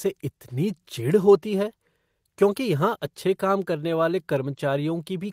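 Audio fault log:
Nothing to log here, since no faults turn up anywhere in this bit of speech.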